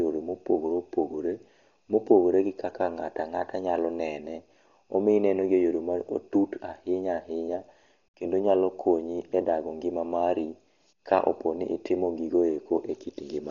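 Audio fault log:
Throughout: Dolby Digital compression, likely. The speech sounds dull, with nothing above 7 kHz, and a rough, fluttering noise clings to voiced sounds. This heavy damage fits an encoder starved near 32 kbps, which narrows the band and leaves unfunded frequency lines for the decoder to fill with dither noise.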